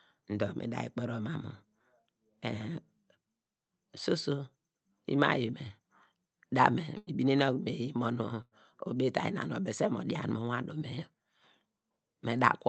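At 6.97 to 7.10 s and again at 8.42 to 8.54 s, the speech freezes into a held, fading sound for roughly 95 ms before jumping ahead. These are bursts of packet loss: the receiver extended the last audio to cover the gap, and about 60 ms of speech is missing each time.

From 8.94 to 9.49 s the speech runs noticeably hurried at unchanged pitch, about 6% fast. This is a jitter buffer speed-up, where the receiver trimmed short pitch-period pieces, around 40 ms in all, to reduce built-up delay.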